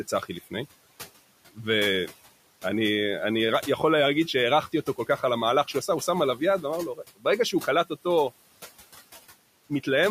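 Noise suppressor artifacts run throughout, cutting the background by about 16 dB. The room noise, about 19 dB below the speech, dips between phrases and swells under them.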